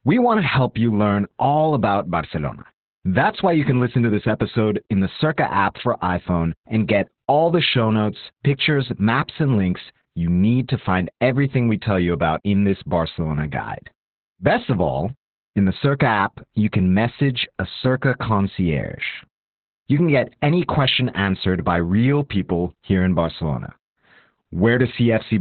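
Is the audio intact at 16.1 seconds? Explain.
No. At 16.1 seconds the speech carries Opus voice compression, present throughout the clip. The linear-prediction coding at about 8 kbps runs narrowband, cutting everything above 4.2 kHz, and codes the excitation coarsely, making the voice muffled, hoarse and slightly robotic. A plain low-pass filter would only dull the sound without adding that gritty texture.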